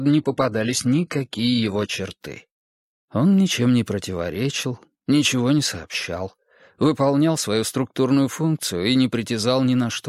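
Adaptive stream starting at a low bitrate, from 0.0 to 2.0 s: the player opened on a cheap version to start fast, with nothing above 11.8 kHz, synthetic-sounding treble and stronger codec artefacts. At 2.0 s it jumps cleanly to fuller sound, pointing to a switch from roughly 16 kbit/s HE-AAC to 96 kbit/s AAC-LC.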